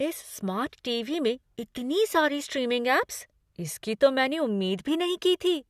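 No technical faults can be heard anywhere here.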